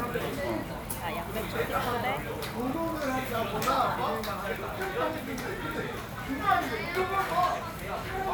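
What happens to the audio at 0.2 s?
Nothing goes wrong at 0.2 s; the sound there plays through intact, with no dropout, click, distortion or other fault.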